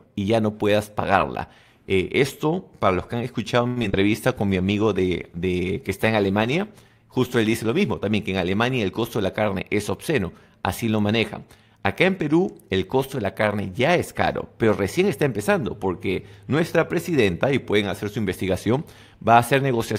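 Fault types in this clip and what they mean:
repeated packet loss (robotic sound): From 3.67 to 3.95 s the sound turns choppy, with four holes in quick succession. The longest runs about 89 ms. Lost or late packets were patched by stretching the previous sound, covering roughly 42 percent of that short span.
call bitrate drop: From 4.35 to 9.59 s the audio grows rough, watery and duller, worst for about 1.7 s at the bottom. The call's bandwidth estimate fell, pushing the encoder from 64 kbps down to 20 kbps, so it coded coarsely and trimmed high frequencies.
jitter buffer speed-up: From 9.01 to 9.64 s the sound hurries along at about 111 percent speed while keeping its pitch. The receiver's buffer had built up excess delay, so it cut out short pitch-period slices, in total roughly 70 ms, to catch up.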